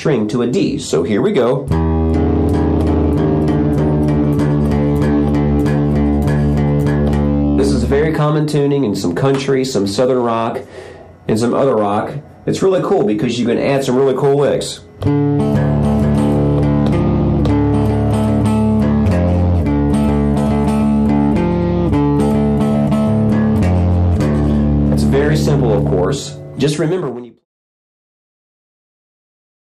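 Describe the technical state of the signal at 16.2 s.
At 16.2 s the signal is intact, with no dropout, click, distortion or level disturbance to be heard.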